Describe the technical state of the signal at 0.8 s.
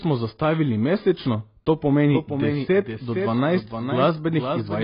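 AAC compression, likely, affects 0.8 s as it does the whole speech clip: nothing remains above 5.1 kHz, and the heavy damage points to a very low bitrate, around 16 kbps, where coarse quantisation strips and smears detail, leaving dull, warbling, fizzy sibilants.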